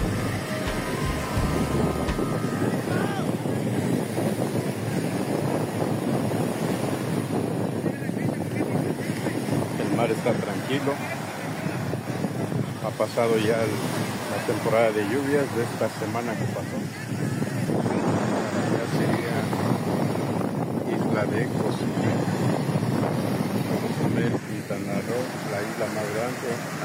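Nothing stood out as a technical problem on listening to this audio.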